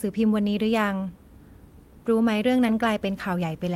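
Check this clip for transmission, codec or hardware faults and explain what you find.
Listening closely to the speech, nothing stood out as a fault.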